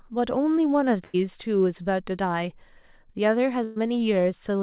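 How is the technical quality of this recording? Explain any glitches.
The speech has two glitches from burst of packet loss, heard over narrowband call audio with nothing above 4 kHz, which fits a G.711 mu-law path. From 1.04 to 1.16 s and 3.64 to 3.78 s, about 100 and 120 ms of audio went missing. The receiver extended the last sound as a fading buzz or hiss, then resumed further ahead.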